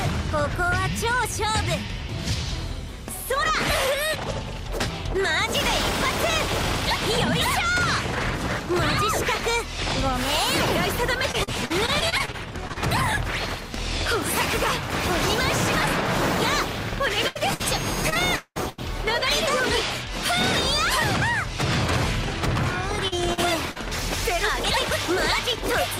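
From 11.31 to 12.78 s there is repeated packet loss, giving a robotic sound. Eleven separate holes, none longer than 45 ms, remove about 260 ms of audio in total. Each hole is filled by stretching the sound just before it, and with roughly a fifth of this stretch synthesised, the result is choppy and robotic with small pieces missing.

At 17.28 to 17.37 s and again at 17.54 to 17.62 s come two bursts of packet loss, losing about 80 ms and 60 ms respectively. In each, the receiver carries the last sound forward and fades it. The result is a brief held buzz or dying hiss, after which the audio picks up further on with the intervening portion gone.

A second span of repeated packet loss runs from 18.10 to 18.80 s. Here five gaps remove about 320 ms, and the longest is close to 200 ms. Almost half of this span is concealment rather than real audio. The long gap is heard as an extended synthetic hold before the real audio resumes.

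Short concealed packet loss appears three times, at 23.08, 23.34 and 23.71 s, each about 40 ms. The decoder bridges every hole with a continuation of the preceding sound and blends back in. Each one is heard as a quick smear or wobble.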